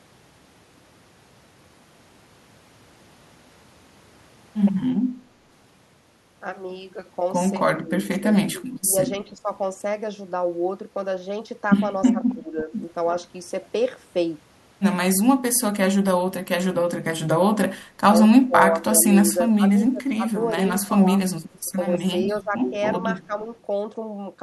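Speech suppressed in double talk likely dips the speech in bursts at 7.81–9.49, 12.07–12.73, 18.46–19.05, 19.56–20.52 and 20.88–23.32 s, by roughly 10 to 25 dB. It is uneven ducking during overlapping talk, not clean silent dropouts.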